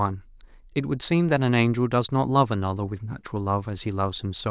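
No technical faults are audible anywhere in the recording.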